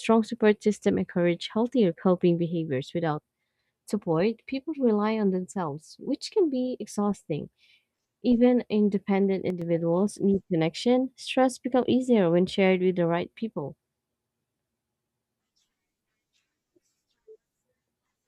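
At 9.50 s, for about 0.11 s, the speech level drops abruptly by about 6 dB and then snaps back just before "need connection." The likely cause is one channel dropping out: one side of a stereo feed went silent, so after summing to mono only half the shared signal remained. On a waveform this is a short, flat-edged step down in amplitude; a spectrogram shows a brief uniform dimming across all frequencies with sharp vertical boundaries.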